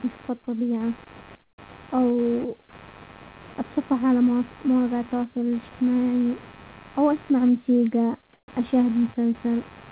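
A faint buzz pulsing around a hundred times a second runs through the whole clip, well below the speech. This is computer activity noise: processor, graphics or mouse load disturbing the audio circuit's shared ground.

From 1.43 to 1.58 s, just after "نشوف الطبيعة", the room background drops out. A smooth, detail-free hiss about 17 dB quieter replaces it. This is comfort noise in place of the background, likely from discontinuous transmission, where the sender went silent during the pause and the receiver synthesised filler noise.

At 1.55 to 1.58 s the next sound begins abruptly, missing its first 30 ms. This is likely an onset clipped by the voice detector, which probably reacted late, so that opening was never sent.

From 8.33 to 8.48 s, after "او اسمع موسيقى", the background again turns into flat synthetic noise, this time about 5 dB quieter. This is the same comfort-noise substitution.

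At 8.45 to 8.48 s the following sound starts with a hard edge, its first 30 ms lost. The voice detector likely clipped the onset again.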